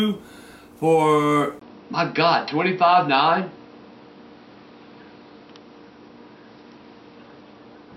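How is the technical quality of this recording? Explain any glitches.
The recording has one clear glitch. At 1.59 s there is a brief 20 ms dropout, and from then to the end everything above 5.7 kHz is gone, leaving the sound duller, with a faint new background noise and no noticeable level change. This is likely an input switched to a poorer device. A spectrogram shows a short gap, then a hard ceiling at 5.7 kHz and a raised noise floor, while the waveform's amplitude stays steady.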